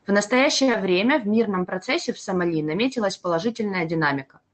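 A short stall from a late packet runs from 0.63 to 0.70 s. A packet arrived late, the jitter buffer ran dry, and the receiver held the last sound for about 41 ms before resuming at the same point. Nothing is lost, but the speech briefly hangs with a faint buzz or dip.

Short concealed packet loss follows at 0.72 to 0.75 s. About 20 ms of audio never reached the decoder. The receiver covered the gap by extending the preceding sound and blending back in, heard as a quick smear or wobble. The surrounding call-codec sound points to Opus limited to about 8 kHz.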